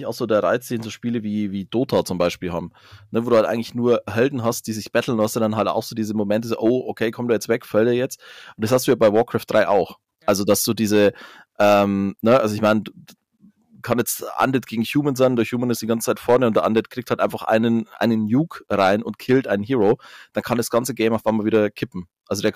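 Hard clipping runs through the speech: a stage overdriven by about 6 dB flattens under one percent of samples, giving crackle on the loudest syllables.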